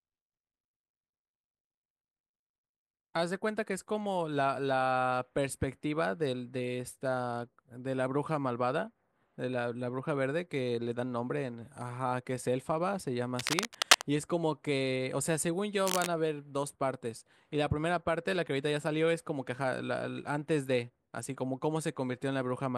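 Cable scratch noise at 13.25–14.02 s, louder than the speech, and more faintly at 15.87–16.07 s: rough, uneven crackle, likely a worn connector's contact flickering as it moved.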